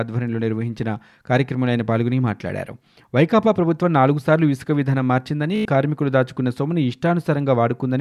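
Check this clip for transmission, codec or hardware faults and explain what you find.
One transmission fault shows up in this speech clip, a Bluetooth stutter from 5.56 to 5.65 s. Packets arrived late or not at all, so the receiver kept replaying its last short buffer, giving a quick machine-gun buzz. About 93 ms goes missing, which fits roughly five dropped packets, and the speech picks up further along, as if it had kept playing.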